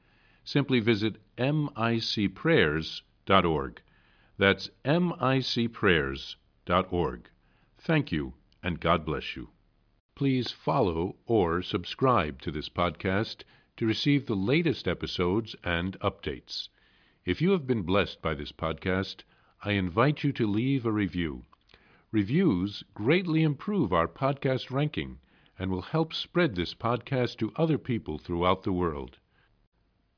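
No technical faults can be heard anywhere in the recording.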